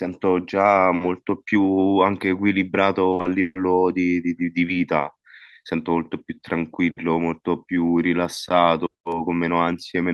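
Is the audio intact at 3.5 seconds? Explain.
No. At 3.5 seconds the speech falls inside a burst of repeated packet loss (robotic sound) running from 3.11 to 3.57 s. Four separate dropouts hit this stretch. The longest lasts 140 ms. The receiver patches each one by stretching the last received sound, covering 240 ms in total. That is about half the span. The repeated, extended fragments give a choppy, robotic texture with pieces of speech missing.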